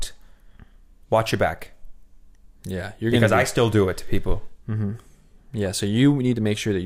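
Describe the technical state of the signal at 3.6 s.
At 3.6 s the speech signal is intact, with no dropout, clipping, glitch or other technical fault audible at that moment.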